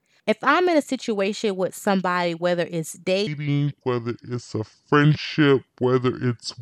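Likely a playback or editing step running on the wrong clock, the speech from 3.27 s to the end, just after "with somebody whether it's", is a section at the wrong speed. It plays at 0.678 times its recorded rate, so it is stretched out and dropped in pitch by roughly seven semitones at the same moment. The voice turns suddenly deep and sluggish, with syllables drawn out.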